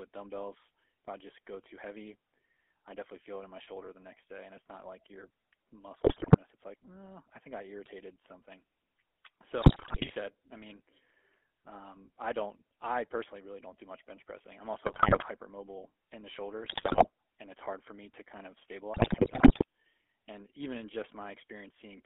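GSM full-rate codec damage runs through the whole of this speech recording. The voice is squeezed into a 300 Hz to 3.4 kHz band and coded from a pulse-driven vocal-tract model, which fits the 13 kbps full-rate coder and leaves a plainly buzzy, gravelly roughness. GSM bit errors break in at 6.04 to 6.38 s, 9.62 to 10.12 s, 14.86 to 15.26 s, 16.64 to 17.08 s and 18.94 to 19.64 s. In these stretches, corrupted filter, pitch and gain values reach the decoder, which points to a weak radio link, so the speech distorts into squawks, pops and gargling.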